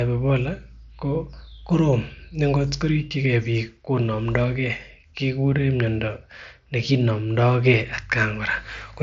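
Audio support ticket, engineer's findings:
Engineer's findings: no fault found in this speech clip, with the mSBC Bluetooth headset path carrying content up to about 7.7 kHz as expected for that codec.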